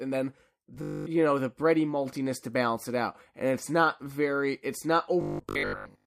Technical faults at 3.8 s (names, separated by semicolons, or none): none